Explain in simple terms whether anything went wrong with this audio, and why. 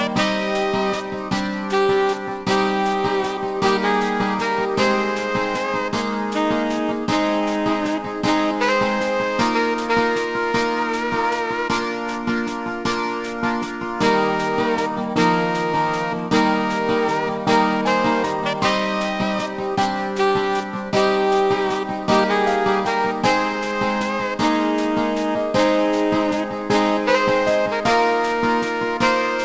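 The whole clip suffers from aliasing. The sound was converted to a lower sample rate, which fits 16 kHz, without first removing its highest parts. Anything above 8 kHz folds back down as false, unrelated tones. Hissy sounds come out gritty and metallic.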